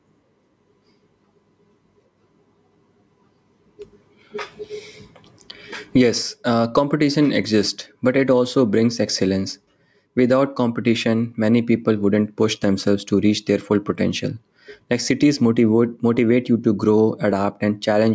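Gain pumping runs throughout the speech. The gain swings by roughly 15 dB, pulled down under loud syllables, likely from excessive gain meeting a fast limiter. The waveform looks flattened.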